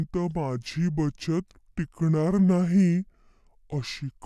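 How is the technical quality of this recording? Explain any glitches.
The whole recording has a wrong sample rate problem, so it plays slow and low from start to finish. The samples are being clocked out more slowly than they were captured, with no rate conversion, so the speech runs at about two-thirds of its proper speed and the pitch drops about 7 semitones, close to a musical fifth. That ratio fits audio made at 48 kHz being played back at 32 kHz. Speed and pitch fall together, which gives the speech that heavy, dragged-out, deepened quality throughout.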